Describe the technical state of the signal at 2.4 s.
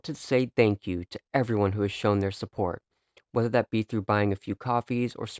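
At 2.4 s the speech is intact, with no audible fault at that moment.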